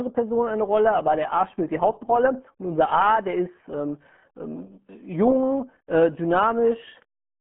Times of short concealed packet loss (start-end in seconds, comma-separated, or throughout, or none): none